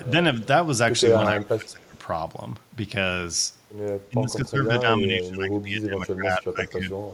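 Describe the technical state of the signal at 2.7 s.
At 2.7 s the speech signal is intact, with no audible fault.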